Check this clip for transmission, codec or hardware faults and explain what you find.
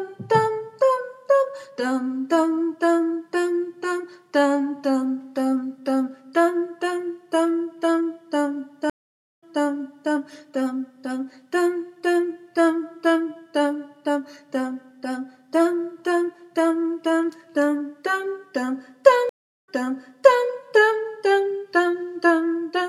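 Two stream reconnect faults occur. At 8.90–10.12 s the audio drops to about 0.52 s of silence, then resumes 0.7 s earlier. At 19.29–20.48 s there is 0.38 s of silence, then a 0.81 s jump back. Each time the connection broke and a fresh decoder restarted mid-stream from a resent burst, so the audio fades back in and repeats material. That repeat sets it apart from a plain dropout.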